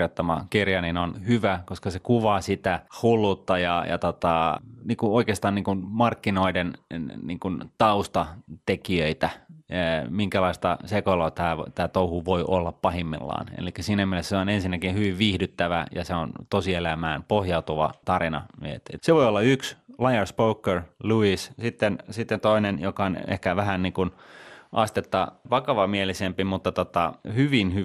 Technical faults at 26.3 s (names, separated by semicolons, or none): MP2 compression; DAB burbling